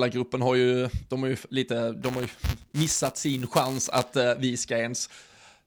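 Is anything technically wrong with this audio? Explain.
Yes. From 2.02 to 4.16 s there is buffer tearing: the speech carries a rattling 200 Hz buzz, pointing to a period of about 5 ms. Writer and hardware read pointer have slipped, so a small sliver of each period replays audio roughly 10 ms old, hard-joined on both sides.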